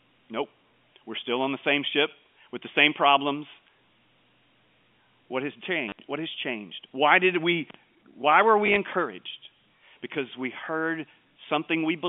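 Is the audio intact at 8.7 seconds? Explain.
No. Just after "did we why were", from 8.66 to 8.76 s, brief stutters come from packet loss with last packet repeated: 60 ms lost, which fits 10 ms packets.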